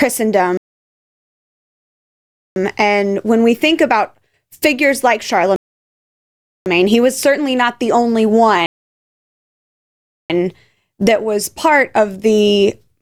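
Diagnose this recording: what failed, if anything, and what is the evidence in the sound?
Speech cuts to silence from 0.57 to 2.56 s, 5.56 to 6.66 s and 8.66 to 10.30 s, then resumes seamlessly: a playback rebuffering stall, the player awaiting downloaded audio.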